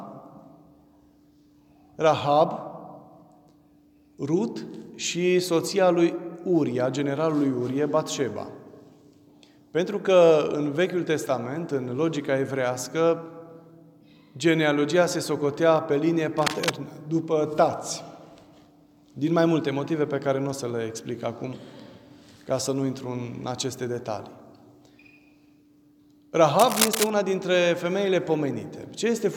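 Cable scratch noise breaks in at 16.38 to 16.70 s, about 5 dB below the sound, and again at 26.59 to 27.10 s, about level with it. Both are dense, rough scratching bursts. A worn cable or connector being moved is the likely cause.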